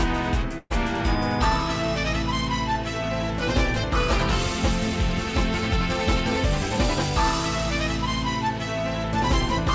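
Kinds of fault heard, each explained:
Burst of packet loss: from 0.58 to 0.72 s, a run of audio packets either never arrived or came too late to play, so the receiver had to cover a gap of 121 ms. It stretched the last sound it had and turned it down, and the final 30 ms fall to silence. Playback then picks up 120 ms further on, so that stretch is lost. Throughout, the call path passes nothing above 8 kHz, which fits a G.722 codec.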